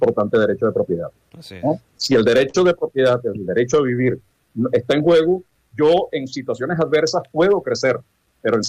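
From 1.69 to 2.56 s the audio catches and drags in five short hitches, the longest about 44 ms. These are repeated stalls (stutter): packets arrived late, the jitter buffer ran dry each time, and the receiver stretched the last sound, filling 83 ms in all while losing nothing. Between 3.30 and 4.51 s the sound slows to 94% speed at unchanged pitch, drawn out by 82 ms. This is a jitter buffer slow-down, where the receiver repeated single pitch periods and slices of pauses to rebuild a low buffer. From 6.64 to 8.02 s the opposite happens: the audio runs about 5% fast and sounds slightly hurried, with roughly 70 ms trimmed away. This is a jitter buffer speed-up, in which the receiver cut short pieces of one or a few pitch periods to shed excess buffered delay.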